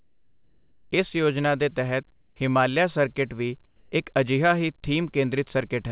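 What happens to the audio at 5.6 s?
Nothing goes wrong at 5.6 s: the speech carries on intact, with the telephone-band sound of the call path, nothing above 4 kHz, which fits a G.711 A-law link.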